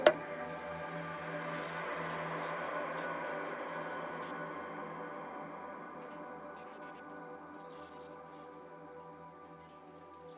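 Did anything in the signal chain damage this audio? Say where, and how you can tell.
No, nothing in the chain damaged it; the audio came over a call path, and the ceiling at 4 kHz fits a narrowband G.711 A-law link, which is simply how that codec carries sound.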